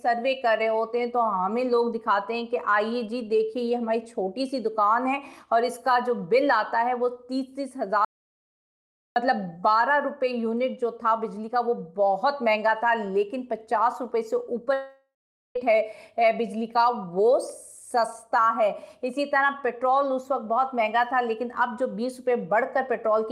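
At 8.05 s the audio cuts off abruptly and returns at 9.16 s. This is an audio dropout to silence, leaving about 1.1 s of silence with no room tone at all. The likely cause is a lost input, such as a disconnected device or a mute, while the recorder kept writing silence. On a waveform it appears as a flat line with hard edges. A spectrogram shows a completely empty vertical band.

From 14.73 s to 15.57 s there is a long network dropout of about 0.82 s, likely from audio packets failing to arrive. The receiver stretches the last fragment into a buzzy, hissy continuation that fades out. The final 0.46 s or so is silence, and then the sound resumes with that stretch missing. A spectrogram shows smeared, repetitive texture dimming into blankness. The waveform shows a decaying envelope followed by a flat segment.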